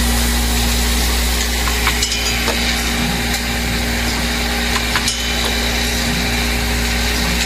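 No technical faults can be heard anywhere in this audio. Nothing in the sound points to a problem in how it was recorded, processed or delivered.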